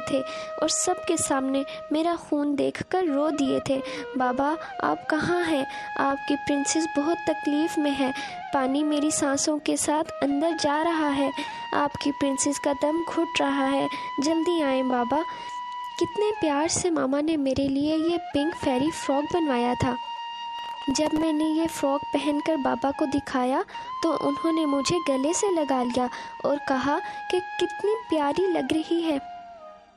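At 20.59 s a burst of processor overload crackle begins. It lasts until 21.23 s, about two thirds of a second. The processor could not fill each small audio buffer in time and fell behind again and again. Each miss dropped in a sliver of silence with hard edges, on the order of a millisecond or two, which fits a very short buffer. Around twenty such gaps pile up. Together they sound like gritty tearing over the sound, stopping once the load eases.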